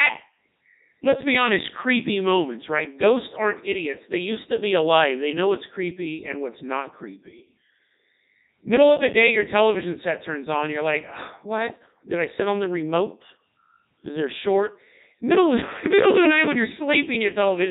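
From start to finish the speech passes through a Codec 2 vocoder, and the damage is heavy. The decoder rebuilds the speech from sine waves using only pitch, voicing, energy and a spectral envelope, so it sounds robotic and buzzy, consistent with the 3.2 kbit/s mode.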